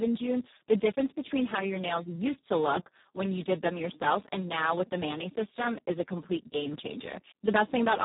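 Throughout the clip, a Speex codec running at a low quality setting starves the excitation of bits, which fits a bitrate around 4 kbps. The speech comes out heavily damaged, hoarse and noisy, with nothing present above 3.8 kHz.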